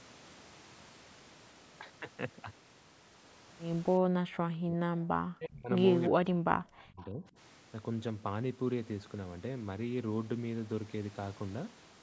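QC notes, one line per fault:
4.00–5.72 s and 6.10–7.36 s, speech suppressed in double talk: the voice repeatedly dips by about 40 dB and breaks into pieces, for roughly one and a half seconds and then one second in total. This is likely an echo canceller mistaking both sides talking at once for echo. Unlike a network dropout, the cuts come and go with the overlap.
6.98–7.05 s, echo leak: a faint delayed copy of the voice, about 25 dB below the speech and arriving 341 ms late, slips through in one short scrap. This is likely loudspeaker echo the canceller failed to remove. Its fixed late offset sets it apart from room reverberation.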